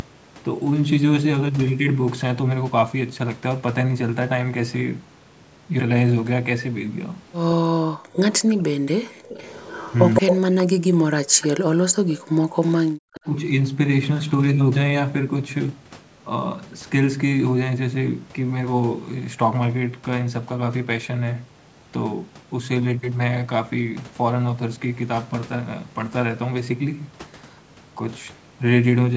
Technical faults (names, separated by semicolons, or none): DC offset; background gated by the echo canceller; speech suppressed in double talk; echo leak